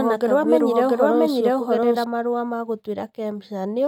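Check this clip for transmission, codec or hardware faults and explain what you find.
One fault is present, a doubled audio track from the start to 2.04 s. A full-band copy of the speech trails roughly 0.7 s behind at about equal level, likely from a slower second capture path, then stops abruptly. Unlike echo, it has no decay or room colour.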